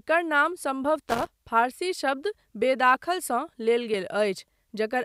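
Audio missing between chunks, likely from a recorder dropping a few milliseconds each time it closes one 1-second chunk and opens the next, causes the first tiny joined skip at 0.96 s, just before "फारसी शब्द". From 1.10 to 1.27 s, a loose connector crackle appears: a contact making and breaking rapidly chops the signal into a brief, irregular burst of scratching. The same small skips then recur at 1.95, 2.95 and 3.94 s.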